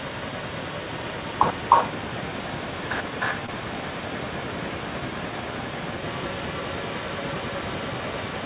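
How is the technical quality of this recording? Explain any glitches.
The recording has two audible problems, an echo running through the whole clip and one brief dropout, over a narrowband call path that leaves nothing above 4 kHz, which fits telephone-style G.711 coding.

Echo leak, 0.0 to 8.45 s: the likely cause is a far end playing the call through a loudspeaker, with its echo canceller failing to remove what the microphone picked back up. That residue was returned down the line, so a second copy of the speech trails the original by about 0.31 s. It sits at roughly the same loudness as the speech itself, making the audio sound doubled and smeared throughout.

Short concealed packet loss, 3.46 to 3.50 s: about 20 ms of audio never reached the decoder in time, and the receiver patched the gap by extending the preceding sound for around 18 ms before blending back into the real signal. 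At that moment you hear a tiny smear or wobble rather than silence, and any brief consonant falling inside the gap can be swallowed.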